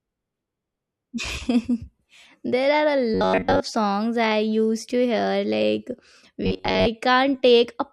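Audio likely reached the playback software too seldom, so it looped a short buffer of roughly 10.7 ms, discarding most of the real signal. This gives robotic sound from repeated short buffers at 3.14–3.60 s and 6.44–6.88 s: the speech becomes a rigid, metallic 93.8 Hz buzz.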